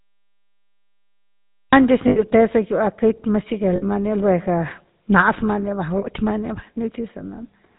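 The whole clip has passed through the GSM full-rate codec, which rebuilds speech from a vocal-tract model driven by sparse, regularly spaced pulses. Nothing above 4 kHz survives, and the voice carries a plainly audible buzzy, gravelly roughness, consistent with 13 kbps coding.

A cut-off start comes first. The recording began late, so the file is digital silence from 0 to 1.73 s. The sound then begins abruptly in the middle of a sound, with no natural attack.

Lost GSM frames follow at 2.08 to 2.19 s (80 ms), 3.76 to 3.83 s (60 ms) and 5.98 to 6.03 s (40 ms). Each time, the decoder repeated the last good frame's settings, holding the sound as a brief, rough metallic ring.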